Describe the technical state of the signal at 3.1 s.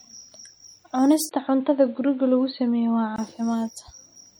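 At 3.1 s the sound falls inside the span from 1.29 s to 3.18 s where the input has likely switched to a poorer device. A narrower-band capture path passes nothing above 4.4 kHz and adds its own noise floor, about 40 dB below the speech, with no clear level change. On a spectrogram the energy stops sharply at 4.4 kHz. The waveform shows a 20 ms gap at the switch at 1.29 s.

MP3 compression is also plainly audible here, consistent with a bitrate around 64 kbps. This is likely because the encoder ran short of bits and dropped weak frequency lines from frame to frame, giving a watery, swirly texture with smeared attacks. A spectrogram shows flickering holes and speckle in the quieter bands.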